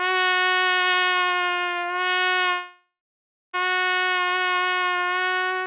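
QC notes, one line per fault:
2.52–3.55 s, long network dropout: the sound breaks off and turns into a fading buzzy or hissy continuation of the last moment, which dies into silence for roughly the final 0.64 s of the gap. Playback then resumes at 3.55 s, with about 1.02 s of material simply gone. This is likely a stretch where no audio reached the receiver, whose concealment kept extending the last sound before giving up. The band-limited G.711 call path, with nothing above 4 kHz, makes the fill sound dull.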